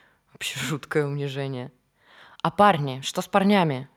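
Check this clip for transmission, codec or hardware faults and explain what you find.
No faults turn up anywhere in this speech recording.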